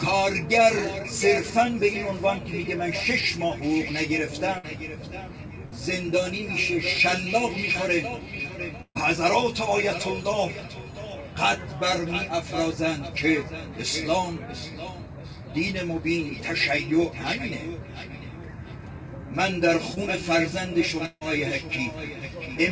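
At 4.58 to 4.65 s and again at 5.65 to 5.74 s there's a burst of packet loss. Each time, roughly 60 ms of audio never made it to the decoder, and the receiver covered the gap by stretching out the last bit of sound and fading it down. You hear a brief held buzz or hiss before the audio picks up a little further along. The third burst, at 8.82 to 8.97 s, is bigger. About 140 ms went missing, and after the fill there's around 70 ms of actual silence before things resume.

Later, at 19.95 to 19.98 s, there's a short concealed packet loss. Only about 20 ms is gone here, and the receiver patched it by continuing the sound for a moment before blending back into the real signal. It comes across as a tiny smear or wobble rather than an obvious gap.

Right near the end, from 21.06 to 21.23 s, the sound carries on as a fading buzz or hiss for roughly 155 ms, then drops to about 50 ms of silence. 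When it comes back, around 160 ms of material is missing. That's likely a long network dropout. In this clip it's brief, so it never settles into the long stretch of dead air you'd get from a longer outage.

Throughout the clip there's nothing above 8 kHz, which fits a wideband call codec along the lines of G.722.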